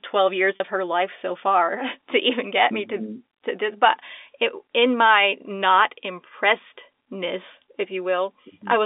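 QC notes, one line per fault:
0.56–0.60 s, packet loss with pitch repetition: About 40 ms of the stream went missing, which fits two 20 ms packets dropped back to back. The receiver concealed the hole by replaying the last pitch period of the speech over and over until real packets resumed. Because the gap is this short, the result is a brief held, slightly buzzy tone rather than a dropout, sitting inside the narrow telephone band of the G.711 line.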